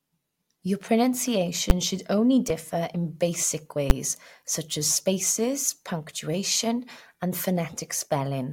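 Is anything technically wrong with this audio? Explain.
Yes, there are two loud bangs from invalid numbers at full scale, at 1.7 s just before "should only differ in", and at 3.9 s right after "only differ in basic" and before "such as spaces punctuation". Somewhere in the processing a calculation went infinite or undefined, and those values got pinned to the largest possible sample. Each bad block is only about 10 ms, so instead of a pop-silence-pop you just get a single sharp, very loud crack.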